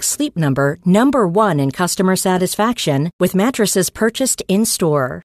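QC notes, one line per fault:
No faults found in the speech. Nothing in the clip calls for an entry.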